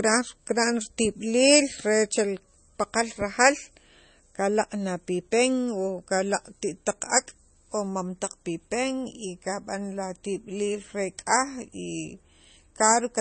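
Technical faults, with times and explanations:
Throughout, MP3 compression: nothing remains above 8.3 kHz, so s sounds are dull. Weak frequency detail flickers between frames, giving a watery, swirly texture. The damage is plainly audible, likely from an MP3 encoder short of bits, and fits about 32 kbps.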